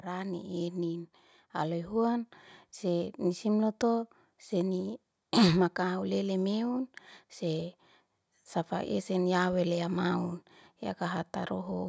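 From 1.56 to 3.51 s the automatic gain rises: the gain control judged the input too quiet and lifted it by about 4 dB, so speech and background swell together before "lotu seni". The gradual two-second climb, not a sudden step, distinguishes it from a level jump.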